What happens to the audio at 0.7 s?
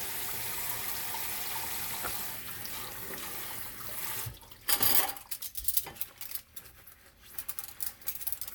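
Nothing goes wrong at 0.7 s: the audio plays through that moment intact, with no dropout, click or other fault.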